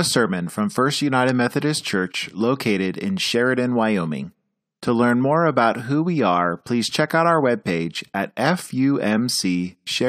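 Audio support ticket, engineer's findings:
Speech recording checked; no audible faults found.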